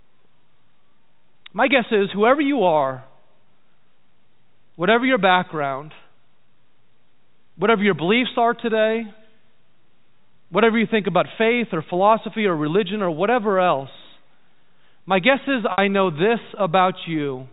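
Speech carried over G.711 telephone coding, with nothing above 4 kHz, shows packet loss with pitch repetition from 15.72 to 15.78 s. For 60 ms the receiver loops the last pitch period, a brief buzzy hold that fades out, which fits three lost 20 ms packets. On the waveform, identical repeating cycles shrink in amplitude. On the spectrogram, flat, evenly spaced harmonic lines replace the moving formants, then dim before the speech cross-fades back in.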